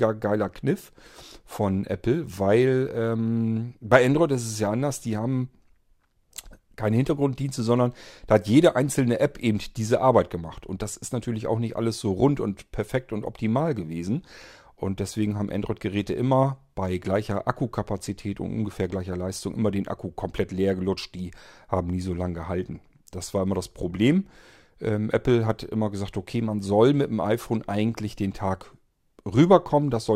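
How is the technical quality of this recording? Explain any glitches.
No technical glitches can be heard anywhere in this speech recording. There is nothing in it that calls for an explanation.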